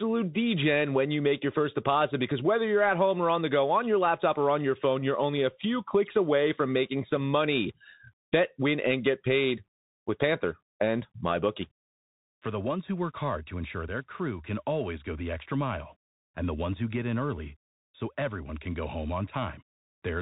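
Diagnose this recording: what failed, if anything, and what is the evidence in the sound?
The failure sits at the codec stage: the speech has passed through a Bluetooth CVSD headset codec for its full length. Nothing reaches above 3.8 kHz, so the sound is narrowband and dull. The damage is plainly audible as granular hiss under the speech and rough, scratchy sibilants. CVSD sends one bit per sample, up or down, with an adaptive step, which fits a 64 kbit/s stream. Fast, loud high-frequency detail outruns that step and distorts.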